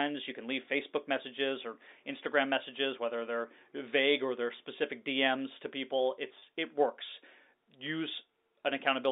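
At 6.39 s, between "to people" and "it works", a packet loss with pitch repetition lasts about 30 ms. The receiver repeated the last pitch period, so the gap sounds like a brief buzzy hold rather than the silent hole or click of a plain dropout. The narrow telephone band is G.711 coding.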